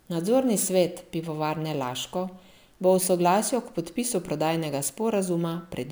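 From start to finish the speech carries a gritty, inharmonic fizz riding on the louder and brighter sounds. That points to crude rate conversion, with samples simply repeated rather than filtered, at a ratio of 3:2, which fits a step up from 32 kHz to 48 kHz. The regular repeat pattern makes tones unrelated to the voice, about 20 dB below it. Unlike clipping, the grit stays present at moderate levels and never sounds squared-off.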